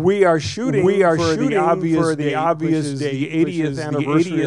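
From start to finish, every sound is followed by a second, identical copy arriving roughly seven tenths of a second later, at about the same loudness as the first. The repeat is full-band and dry, with no fading tail or room colour. This is a doubled audio track, most likely caused by the same signal reaching the mix twice, once directly and once through a slower capture path.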